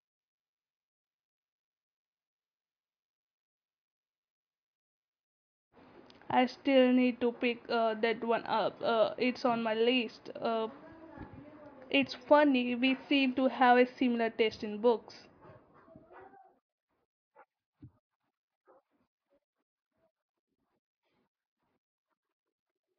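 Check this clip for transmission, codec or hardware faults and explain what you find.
No faults found anywhere in the speech recording.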